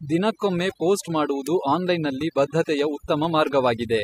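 From the first moment, the speech carries overdone noise removal. A noise reduction stage was pushed too hard. It pulls individual frequency bands down or out whenever they sit close to what it takes for noise. Softer parts of the voice fall below that line and vanish with the hiss. The gaps between phrases drop to near silence, sprinkled with small twinkling specks.

At 1.47 s a sharp snap or tight cluster of clicks sits on top of the speech. It is very brief, only a few milliseconds, and stands apart from the sound around it. The cause is likely an electrical switching spike. A nearby switch, motor or static discharge would throw off a short arc, and the audio line would pick it up.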